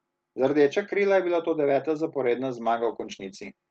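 Call bitrate drop from 2.65 s to the end: the encoder's rate falls from 32 to 12 kbps, coding the speech far more coarsely, so it turns rough and muffled.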